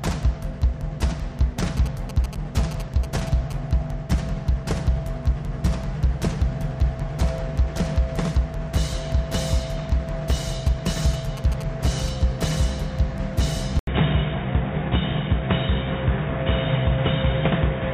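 GSM signalling bursts run from 1.77 to 3.52 s and again from 10.67 to 12.10 s. A nearby 2G phone was signalling in short groups of radio bursts, and the audio circuit rectified them into a galloping dit-dit-dit of 217 Hz buzzes, roughly 15 dB below the sound. At 13.79 s an 80 ms silence interrupts the audio. From there to the end nothing passes above 3.8 kHz, and a new background noise sits about 45 dB down at a similar overall level. The likely cause is the input switching mid-recording to a poorer device, either another microphone or a headset's call profile, with a narrower band and its own noise.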